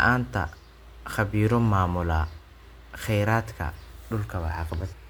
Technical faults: damaged data in a compressed stream

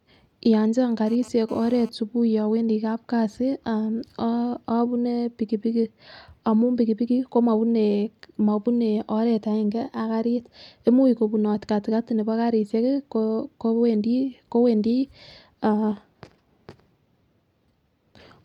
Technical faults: GSM phone buzz

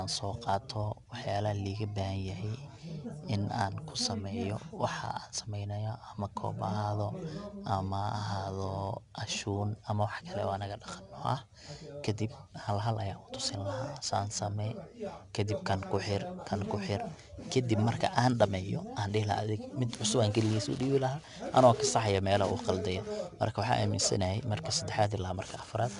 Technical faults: 4-bit ADPCM compression

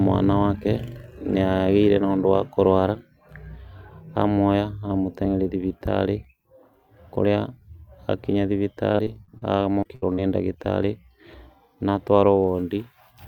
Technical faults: repeated packet loss (robotic sound)

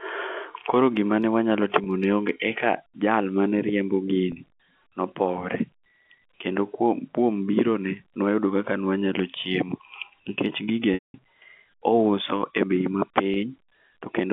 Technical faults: packet loss with pitch repetition

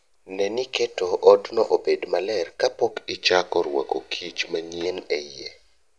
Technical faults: wrong sample rate

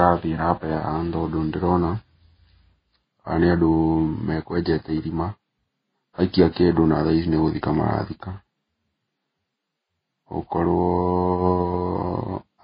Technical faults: transcoding between lossy codecs

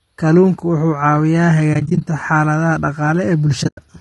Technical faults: low-delay AAC compression; AAC frame loss with muting

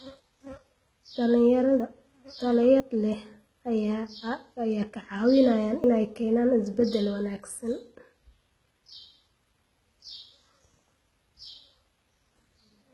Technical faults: HE-AAC compression; dropped buffer (overrun)

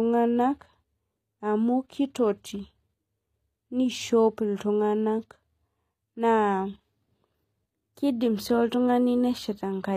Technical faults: HE-AAC compression

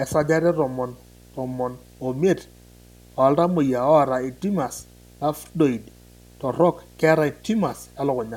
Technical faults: video or display buzz

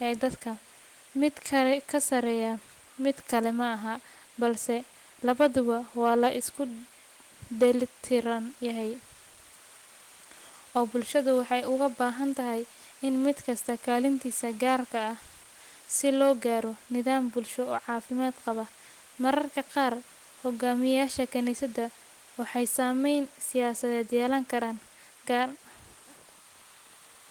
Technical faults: none

